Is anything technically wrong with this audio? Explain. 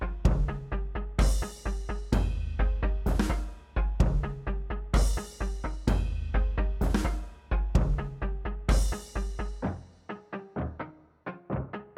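No, nothing technically wrong can be heard in this audio. There are no faults to point to at any moment in the clip.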